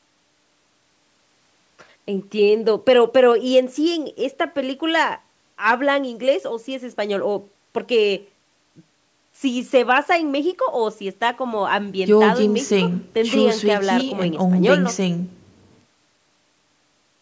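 Nothing stood out on listening to this speech; the traces of the call's microphone processing are that the sound stops at about 8 kHz and the lowest bass is taken out, which is how that path normally behaves.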